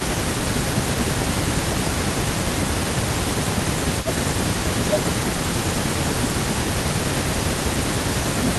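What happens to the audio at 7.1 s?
At 7.1 s the speech dips, losing level by as much as around 15 dB, from 6.64 s to the end of the clip. This is likely speech suppressed in double talk: with both sides talking, the loudspeaker side's echo canceller cannot separate its own talker from the loudspeaker echo and attenuates it along with the loudspeaker signal.

Underneath, a delayed copy of the speech trails by 200 ms, well below the direct speech. This echo leak runs through the whole clip. The loudspeaker side's canceller is likely leaving residual echo that is sent back down the line.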